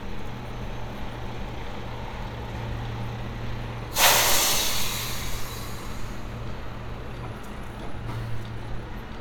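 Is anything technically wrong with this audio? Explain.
No, nothing technically wrong can be heard here.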